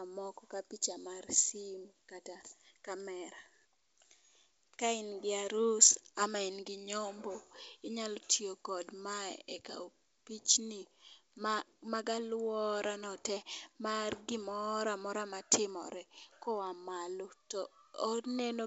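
No technical faults are audible in this speech recording, which carries the full band expected of G.722 wideband telephone coding at 64 kbit/s, reaching up to about 7 kHz with at most a faint trace of the coding in the upper band.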